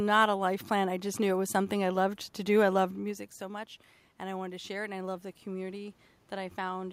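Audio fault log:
2.97 to 6.88 s, automatic gain rising: around 3 s the talker moves away and the level at the microphone falls by about 14 dB. The automatic gain control hears the quieter input and slowly raises its gain by about 6 dB over nearly 4 seconds. Voice and room noise swell together, so the background grows along with the speech. Because the boost is smaller than the drop, the voice ends up still about 8 dB below where it began.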